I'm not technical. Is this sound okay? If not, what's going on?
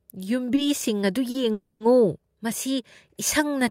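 No. There are two kinds of problem in this speech clip.

First, two short stalls from a late packet. These happen at 0.55 to 0.60 s and at 1.30 to 1.37 s. A small chunk of the call arrived late. The receiver had nothing new to play, so it stretched the last sound to fill the wait: 20 ms the first time, 40 ms the second. You hear a sound held a touch too long, with a slight buzz or dip. Nothing is lost. The speech just resumes a little later.

Second, a call audio freeze from 1.52 to 1.83 s. For about 280 ms the sound gets stuck. The last bit is drawn out into a buzz or hiss that fades but never goes fully silent. The likely cause is a group of data packets held up on the way. When they arrived, the speech picked up exactly where it stopped. So no speech is missing. Instead, a pause was pushed into the middle of it.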